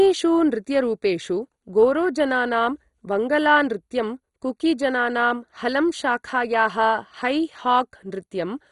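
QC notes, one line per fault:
Throughout: MP2 compression, heavy. The speech sounds dull and gurgling, with a granular, watery roughness, and nothing comes through above about 11.2 kHz. This fits a likely MPEG Layer II encode at around 56 kbps. Too few bits switch off upper sub-bands, and the remaining bands are coarsely quantised and flicker on and off.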